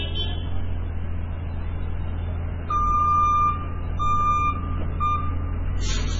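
MP3 compression runs throughout: heavy damage, nothing above 7.5 kHz, likely from a very low bitrate near 16 kbps, starving weak frequency lines into watery, swirling artefacts and smeared attacks.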